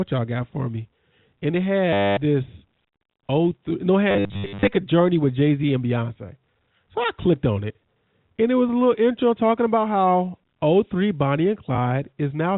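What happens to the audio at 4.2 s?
From 4.11 to 4.67 s, between "no it" and "a journey with", packet loss with last packet repeated makes the audio stutter robotically, with repeats fitting 10 ms packets.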